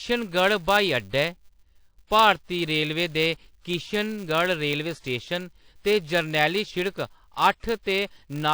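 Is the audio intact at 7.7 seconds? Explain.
No. At 7.7 seconds the speech carries the same damage as the rest of the clip. The first fault sounds washy and ringing, with a hiss that swells and fades along with the speech. This is likely WMA compression, at a level of damage that fits a bitrate around 48 kbps. Long transform blocks smear the quantisation noise over tens of milliseconds, and weak components are dropped. On a spectrogram, the upper bands look patchy with holes where detail has been zeroed.

The second fault is a filter restarted on every block. At each block boundary the filter loses its memory and starts again from silence, so each block opens with a small transient. The ticks arrive every 5 ms and merge into a 200 Hz buzz that gets louder and quieter with the speech. A spectrogram shows a harmonic comb at 200 Hz and its multiples. Zoomed in, the waveform shows regularly spaced glitches at each block start.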